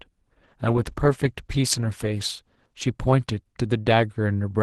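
At 0.48 s a call bitrate drop sets in and lasts to the end. The encoder had to code the speech with far fewer bits. The sound turns rough and muffled, which fits a fall from 32 to 14 kbps, held lowest for 1.94 s.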